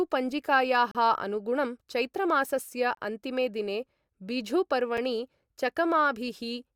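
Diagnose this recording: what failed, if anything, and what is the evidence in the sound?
The playback stage mis-joins 2-second stream segments, leaving a gap between stream segments that is filled with silence. Hard-edged holes fall at 0.91–0.95 s, at 2.95–2.97 s before "अन्तिमे दिने बिझू", and a 6 ms one at 4.97 s after "चैत्रमासस्य अन्तिमे दिने बिझू". Nothing is lost, only pushed later.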